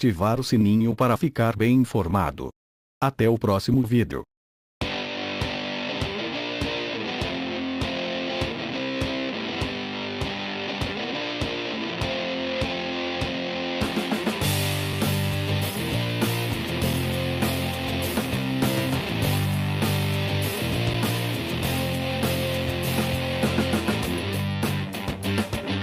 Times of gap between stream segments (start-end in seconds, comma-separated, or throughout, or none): 0.91, 14.93, 16.93, 20.94